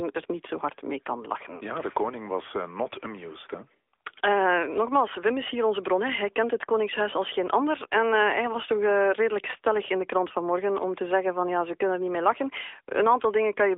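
From start to finish, the speech carries AMR narrowband mobile codec damage. Nothing above 3.7 kHz survives, and the band sits near 300 Hz to 3.6 kHz. The codec rebuilds the voice from a vocal-tract model, so it sounds buzzy and synthetic, which fits a mid-rate mode near 10 kbps.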